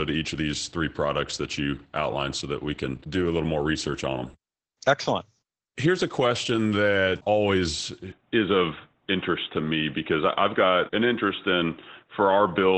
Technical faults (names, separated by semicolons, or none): Opus voice compression; input switched to a poorer device